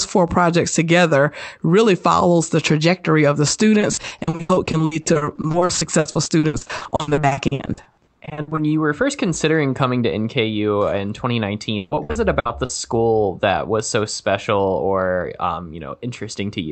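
From 3.79 to 8.59 s, after "the trajectory of the" and before "you were first considering", repeated packet loss gives robotic sound. Dozens of short holes, none longer than 80 ms, are patched by stretching the last sound. About 41% of that stretch is filled this way, so it sounds choppy. It returns from 11.77 to 12.71 s, with fewer but longer gaps of up to 140 ms.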